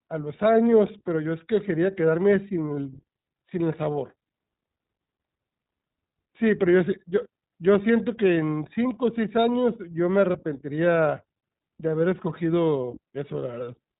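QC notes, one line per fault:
Throughout, iLBC codec: the speech sounds narrow and boxed-in, with nothing above about 3.8 kHz, so sibilants and breath lose their edge. The coding damage is plainly audible as a slightly rough, synthetic grain. The cause is iLBC narrowband coding, which encodes each short frame's excitation on its own rather than building on the previous one. The texture fits 20 ms frames and points to the 15.2 kbps mode.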